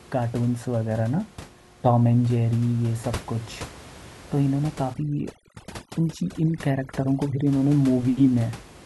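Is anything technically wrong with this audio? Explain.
Yes. From 4.94 to 7.47 s there is overdone noise removal: a noise reduction stage set far too aggressively pulls individual frequency bands down or out whenever they sit near its noise estimate, taking quiet parts of the speech with them. The room noise, about 19 dB below the speech elsewhere, drops and breaks up into twinkling specks.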